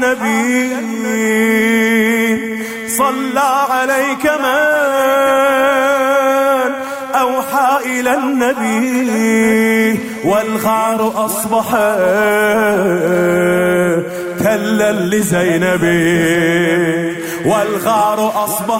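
Nothing in the audio stands out as a technical fault, so there's nothing here to flag.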